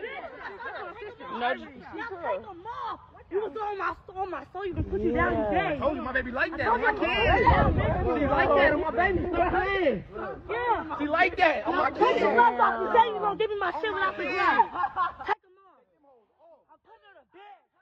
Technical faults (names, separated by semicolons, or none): audio dropout to a faint residue